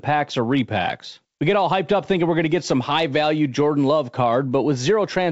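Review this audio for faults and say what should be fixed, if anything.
Nothing in the recording needs fixing. The speech comes through G.722 wideband telephone coding at 64 kbit/s, with clear bandwidth up to about 7 kHz and, at most, a faint hiss from the coarsely coded upper band.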